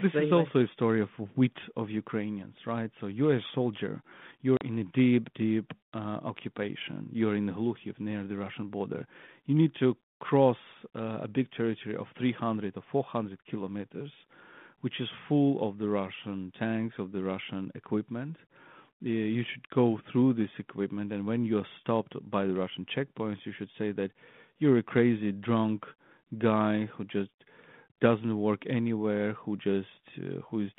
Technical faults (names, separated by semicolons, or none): packet loss on an ADPCM call